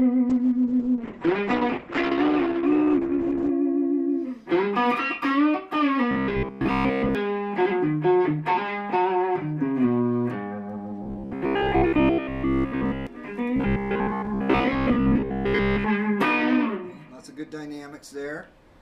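From 0.3 to 3.57 s there is a call bitrate drop. The encoder falls from 48 to 9 kbps. The bandwidth shrinks from 20 kHz to 8 kHz. The sound turns muffled and coarse, with a rough, watery texture, until the rate recovers.

Robotic sound from repeated short buffers follows, at 6.11 to 7.15 s, 11.03 to 13.07 s and 13.56 to 15.87 s. A rigid, metallic buzz near 66.7 Hz sits on the audio. This likely comes from a 15 ms chunk being repeated to cover late audio. Most of the real sound is lost.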